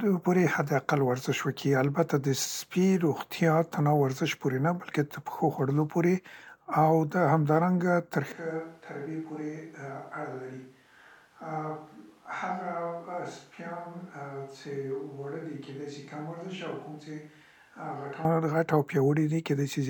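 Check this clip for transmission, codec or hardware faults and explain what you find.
One fault stands out. A switch to a distant microphone runs from 8.32 s to 18.25 s. The close microphone's feed likely dropped out, leaving a pickup farther away. The speech abruptly turns roomy, hollow and thinner in the bass, falls about 10 dB, and carries background noise roughly 30 dB below it, then snaps back.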